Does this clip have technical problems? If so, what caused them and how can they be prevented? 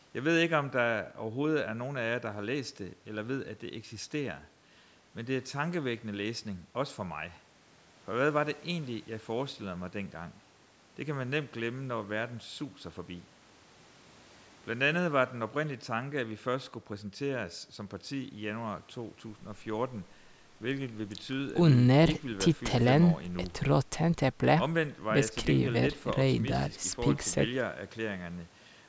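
No, the speech shows no technical faults; the content stopping at about 8 kHz and the trimmed lowest bass are just the normal call microphone processing, so there is nothing to prevent.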